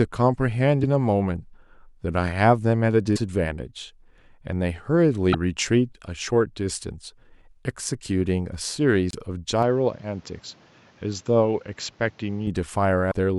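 At 0.82 s compressed frames are skipped: one frame of 26.1 ms goes missing, so the sound jumps ahead by around 30 ms. Because adjacent frames overlap, the join is a soft smeared blip rather than a hard click, and nothing garbled follows it.

At 3.15 to 3.18 s, 5.32 to 5.35 s, 9.11 to 9.15 s and 13.10 to 13.13 s the audio again jumps forward, but each jump is followed by a few tens of milliseconds of corrupted sound. That trailing damage, spanning about one or two 26.1 ms frames, points to a likely broken MP3 bit reservoir: frames read borrowed data that now belongs to other frames.

From 9.63 to 12.47 s the input switched to a poorer device. With no gap at the switch, the sound suddenly turns duller, with nothing above 7.6 kHz, about 5 dB quieter, and carrying new background noise about 30 dB below the signal. It clears at 12.47 s. Unlike the brief glitches, this is a lasting change in tone, which is likely a different microphone or a headset call profile.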